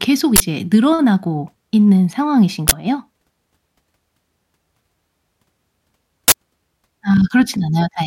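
Short, harsh bursts of digital noise cut through the speech at 0.36–0.40 s, 2.68–2.72 s and 6.28–6.32 s. These are uninitialised buffers: each 40 ms block played back stale memory before any real audio was written to it.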